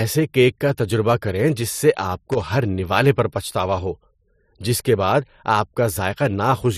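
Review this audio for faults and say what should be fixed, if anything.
Loose connector crackle at 2.32 to 2.42 s: a worn or dirty contact briefly made and broke as it moved, chopping the speech into an irregular burst of crackle. To prevent it, clean or replace the connector and secure the cable so it cannot shift during recording.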